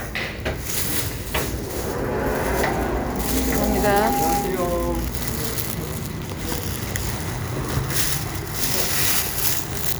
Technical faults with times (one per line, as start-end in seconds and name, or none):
3.18-4.70 loudspeaker feedback squeal